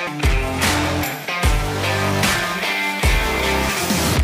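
At 0.07 s, right at the start, there is damaged data in a compressed stream. Part of the encoded file was corrupted at this point. The decoder could not read the frame there correctly. It lost its place in the stream and had to hunt for the next valid frame header before carrying on. The result is a chirp, squawk, click or short hole in the sound.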